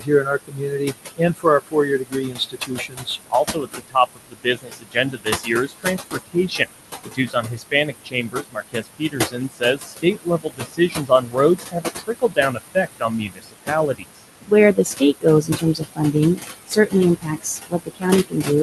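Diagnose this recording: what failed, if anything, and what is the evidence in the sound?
Noise suppressor artifacts, in the call processing stage: throughout, room noise about 8 dB below the speech is pushed down about 17 dB, sinking between the words and rising under them.

Speech cut by the noise suppressor: around four seconds within 0.0 to 6.71 s, then 7.05 to 18.6 s, faint speech is mistaken for noise and swallowed by up to about 22 dB.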